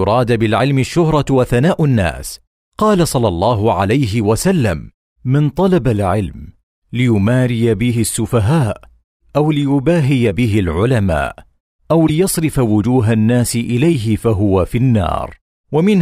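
Speech clip with a 40 ms glitch from 12.06 to 12.10 s: the audio jumps ahead. The likely cause is a broken MP3 bit reservoir, where frames after a cut decode with another frame's bytes; the span fits roughly two 24 ms frames.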